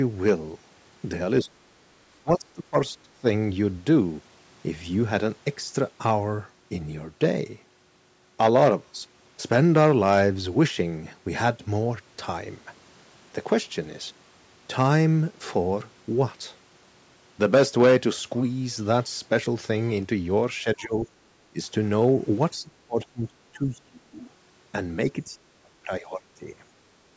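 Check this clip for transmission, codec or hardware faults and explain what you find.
The speech drops out in six places: 1.42–1.68 s, 2.23–3.26 s, 20.63–21.06 s, 21.5–21.59 s, 22.57–24.18 s and 25.24–26.48 s. This is most likely speech suppressed in double talk. The echo canceller seems unable to separate this talker from far-end echo while both sides speak, so it attenuates the send path. Level falls by about 15 to 30 dB, deepest near 23 s, and the voice thins or breaks into fragments, in the longest stretch for about a second in total.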